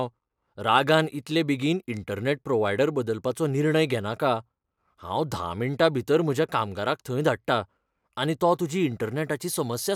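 Speech, with no technical faults audible anywhere.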